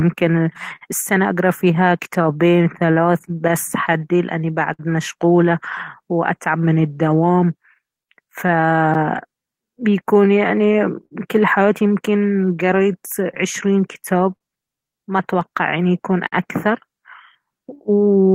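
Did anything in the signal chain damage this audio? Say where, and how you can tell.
Yes. The damage is in the network and the receiver's jitter buffer, not in wiring or conversion.

Clock drift between sender and receiver runs through the whole clip. The sender's clock is slower, by roughly 5 percent, so the buffer keeps draining. This differs from a single dropout because the unsteadiness never settles but recurs unevenly from start to finish.

The receiver makes repeated timing corrections from 0.02 to 17.99 s, stretching the speech to about 97 percent speed and adding around half a second overall. You hear an uneven tempo and faint hiccups, always lengthening, which marks buffer adaptation rather than packet loss.

There are scattered short gaps from 0.76 to 4.81 s and again from 13.35 to 16.34 s, about seven in each span, the longest around 50 ms. Each was concealed by continuing the last sound, so brief ticks and smears appear but nothing is skipped, unlike true loss.

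A short stall from a late packet occurs at 11.06–11.13 s. The buffer ran empty, and a sound is held for 51 ms before the speech resumes from the same point. This single held moment with a slight buzz or dip differs from the scattered concealments.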